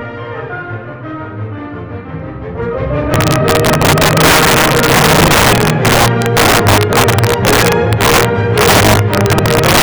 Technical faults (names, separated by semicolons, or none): integer overflow